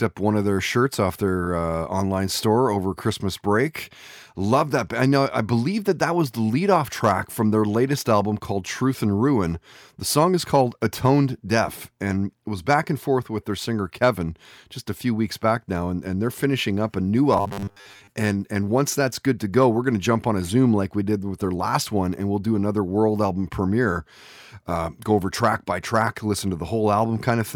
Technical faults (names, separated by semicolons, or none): robotic sound from repeated short buffers